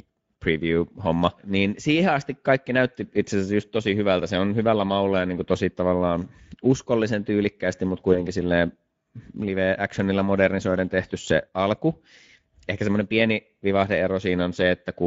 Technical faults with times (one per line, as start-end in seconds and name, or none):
0.00-15.06 Speex codec
8.13-8.26 VoIP packet loss concealed by the speech codec